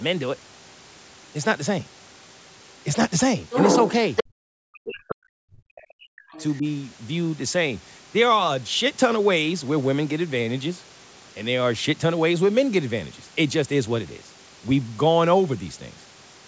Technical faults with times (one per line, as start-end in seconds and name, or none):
0.00-16.47 low bit depth with dither
3.51-4.24 other side's voice leaking through
4.26-6.64 speech suppressed in double talk
5.08-5.13 other side's voice leaking through
6.32-6.44 other side's voice leaking through